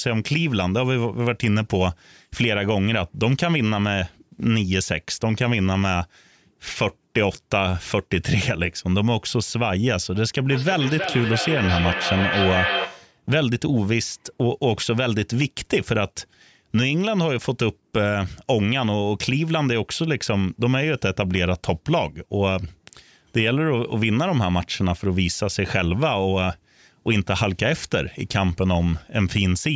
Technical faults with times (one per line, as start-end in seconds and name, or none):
10.51-13.25 feedback echo between two devices